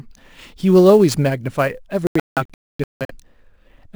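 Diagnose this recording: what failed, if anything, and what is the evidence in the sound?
Sample clock jitter at the converter stage runs through the whole recording: a faint roughness, far below the speech, that swells on loud and bright passages and disappears in pauses. The clock's timing wobble, on the order of ten microseconds, misplaces samples in proportion to waveform slope. A steady noise floor would stay audible in silence.

A digital broadcast dropout at the reception stage opens holes in the sound between 2.07 and 3.15 s. About 0.77 s of audio is lost across roughly one second as several clean mutes, the longest 0.26 s. The receiver silenced failed frames rather than concealing them, unlike network packet-loss concealment.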